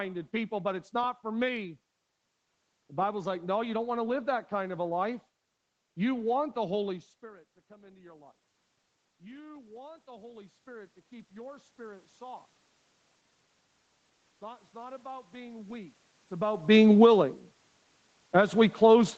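From 9.18 to 12.51 s, automatic gain rising lifts the level by about 7 dB after the talker moves away and the input drops about 22 dB. Voice and room noise swell together. From 14.39 to 16.94 s, gain climbs again, about 5 dB.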